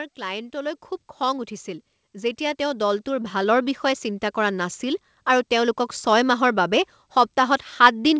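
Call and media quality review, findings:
Automatic gain rising, 0.17–4.85 s: voice and background swell together by about 13 dB, settling just before "আৰু তেওঁলোকক". AGC judged input too quiet and slowly ramped gain.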